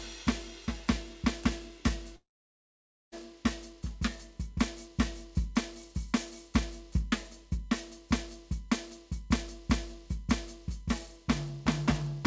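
Under the whole piece of music there's a steady USB whine at 1 kHz, sitting about 40 dB below the music, from the bus's 1 ms frame activity leaking in through power or ground. From 2.16 to 3.14 s the music stops: a short fading buzz, then near silence for about 0.9 s, before it resumes with roughly a second missing. That's likely a long network dropout. The G.722 call path cuts everything above 8 kHz throughout.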